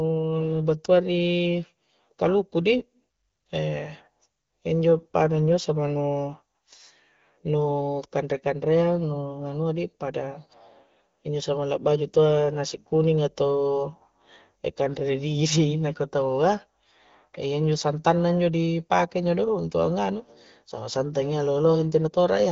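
No technical faults occur in this speech, which comes through the AMR wideband (HD Voice) codec at 15.85 kbit/s with only light coding damage and nothing above 7.3 kHz.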